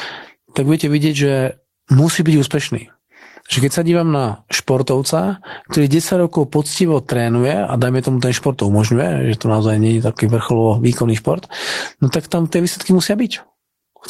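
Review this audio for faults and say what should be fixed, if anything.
Gain pumping runs through the whole speech clip: background noise swells in pauses and ducks by around 10 dB under each loud syllable, likely from excessive input gain driving a fast limiter. On a waveform, the noise floor rises between phrases and the peaks look flattened. Set the microphone gain lower and ease the limiter's attack and release so quiet gaps aren't lifted.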